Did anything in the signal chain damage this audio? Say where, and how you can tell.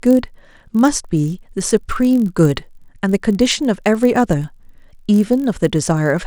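Yes: filter restarted on every block, throughout, in buffer processing. A level-following 46.9 Hz buzz marks each reset transient, which fits 1024-sample blocks.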